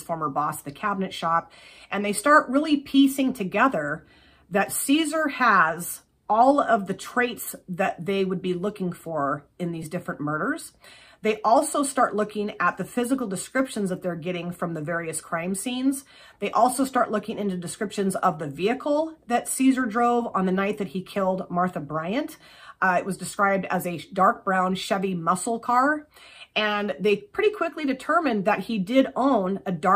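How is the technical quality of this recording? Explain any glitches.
One brief glitch stands out. At 9.83 s, a repeated buffer: a 5 ms piece plays three times because fresh audio arrived late, giving a tiny buzzy click. Unlike a dropout, nothing goes silent or missing.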